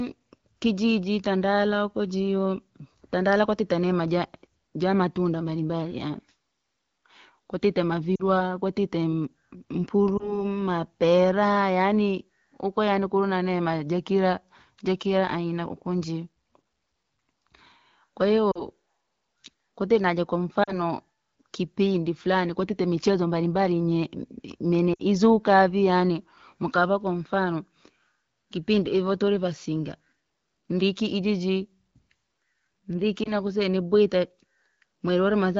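Lost AMR speech frames occur at 8.15–8.22 s, 10.17–10.44 s (just before "mapera yaani uko yaani"), 18.51–18.67 s, 20.63–20.79 s (right after "kwatite naja"), 24.93–25.0 s and 33.24–33.32 s. Each gap is only 20 to 60 ms. Corrupted frames failed their checks, so the decoder repeated the last good pitch and vocal-tract settings at falling gain. The single-frame losses give a short warble or dip, while the runs of two or three frames drop to near silence within two frames, then a weak, rough return. There is no hard click as with a plain dropout. Around it, the clear wideband speech points to AMR-WB at about 12.65 kbit/s.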